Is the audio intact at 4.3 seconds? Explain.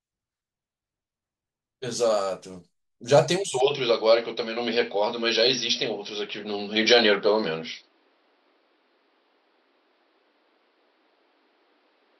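No. From 3.60 s to the end, the speech sounds like it's coming through an input switched to a poorer device, likely the system jumping to another mic or a headset's call profile. Nothing gets through above 5.7 kHz, so at 4.3 s it's dull and boxy. There's no gap at the changeover and no real level jump, just a new noise floor sitting roughly 40 dB under the speech.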